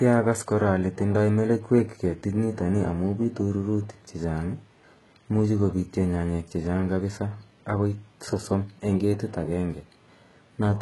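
A speech clip where the upper range sounds rebuilt rather than recorded: s sounds come out gritty and metallic, and nothing reaches above about 11.5 kHz. That's likely heavy HE-AAC compression, with spectral band replication faking the treble, which fits a very low bitrate around 12 kbps.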